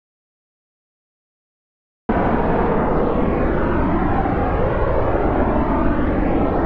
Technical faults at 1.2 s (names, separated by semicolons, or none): audio dropout to silence